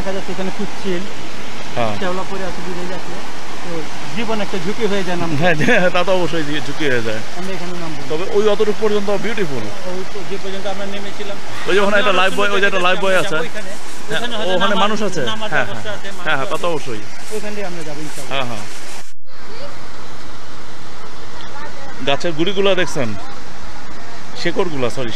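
Nothing about the sound itself gives this fault away. A DC offset runs from start to finish, with the whole waveform shifted off the zero line by a constant of about -12 dBFS. Because it is a fixed shift rather than a vibration, it carries no pitch and can't be heard as such. Instead it eats into headroom on one side of the waveform and appears as steady energy pinned at 0 Hz at the very bottom of the spectrum.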